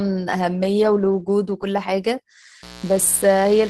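Speech, carried over an Opus call path limited to about 12 kHz. At 0.41 to 0.43 s, one lost packet was rebuilt from error correction. The next packet's low-bitrate copy fills those 20 ms, so there is no gap, just a brief rough, noisy patch. From 2.63 s to the end, a steady raspy mains buzz sits well below the speech. Switching spikes twice in every 60 Hz cycle leak in as 60 Hz harmonics, likely from a dimmer, rectifier or missing shield.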